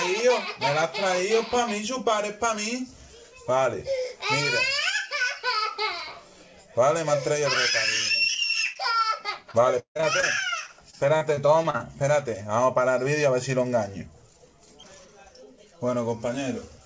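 At 8.34 s and 8.73 s, short concealed packet loss occurs. About 20 ms of audio goes missing each time. The receiver extends the preceding sound, leaving a brief smear or wobble.

Repeated packet loss (robotic sound) follows from 9.51 to 10.24 s. Five gaps are patched, the longest 159 ms, covering about a third of the stretch. From 10.66 to 11.82 s, seven shorter gaps follow, the longest 39 ms. The repeated patching makes the audio choppy, with pieces missing.

Throughout, nothing is heard above 8 kHz, which fits a wideband call codec.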